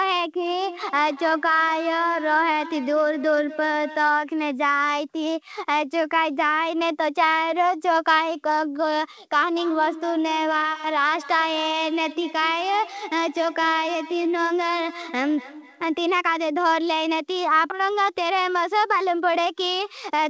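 From 0.43 to 4.27 s and again from 9.56 to 16.06 s, the speech carries feedback echo between two devices: a second device on the same call replays the audio, the first microphone recaptures it, and neither echo canceller removes the other's output. Each syllable returns roughly every fifth of a second, at most about 15 to 16 dB below the speech, thinner and ringing. A spectrogram shows stacked, evenly spaced copies, and all content stops at 8 kHz, consistent with a G.722 call codec.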